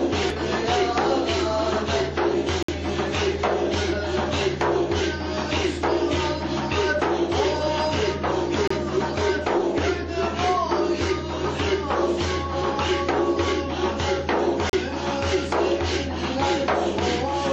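At 2.63, 8.68 and 14.70 s, the sound drops out for about 58, 29 and 36 ms. These are gaps between stream segments, roughly every 6 s. The segment timestamps leave holes the player fills with silence. The edges are hard. Nothing is lost.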